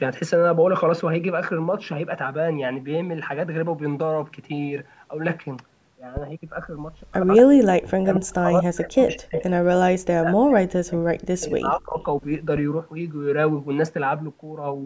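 At 6.17 s a phantom power thump occurs: a supply switching on or off on a live input sends a step through the coupling capacitors, heard as a deep thump decaying in 13 ms. Echo leak follows at 7.36 s, a delayed copy 231 ms behind, roughly 10 dB below the speech, likely residual loudspeaker echo the canceller missed. Speech suppressed in double talk then pulls the speech down by as much as 40 dB from 7.54 to 7.84 s and from 8.02 to 9.36 s, likely the canceller muting it while both sides talked. Within and just after that stretch, echo leak returns at 9.10 s and 9.36 s, each 257 ms behind, roughly 15 dB and 10 dB below the speech. A further double-talk dip runs from 10.2 to 11.99 s. A second phantom power thump at 12.56 s decays over 28 ms.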